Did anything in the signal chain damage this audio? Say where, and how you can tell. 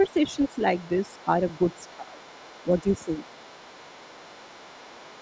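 Yes, in the call processing stage, specifically the echo canceller. Speech suppressed in double talk appears at 0.0–0.43 s, 1.24–1.3 s, 1.91–2.41 s and 2.63–3.12 s. The talker dips by about 5 dB, and by about 15 dB at 1.91–2.41 s. The likely cause is the canceller ducking the near voice while the far voice overlaps. Unlike a network dropout, the level sags rather than going silent.

The other side's voice is leaking through at 0.04–0.6 s (about 20 dB below the speech), 0.77–1.23 s (about 30 dB below) and from 1.47 s to the end (about 25 dB below). This is likely residual loudspeaker echo the canceller failed to remove. It differs from room reverberation because it is a separate voice, not a tail of the talker's own sound.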